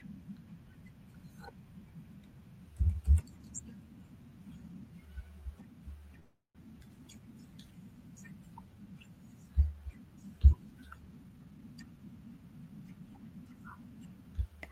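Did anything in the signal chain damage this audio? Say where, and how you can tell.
Yes. At 6.19 to 6.57 s the last sound stretches into a fading buzz, then silence. Speech resumes without loss, 0.35 s later: a call audio freeze, likely packets delayed on the network.

From 11.24 to 13.78 s speech runs hurried at unchanged pitch, about 114% speed. This is a jitter buffer speed-up, trimming around 0.4 s of pitch periods.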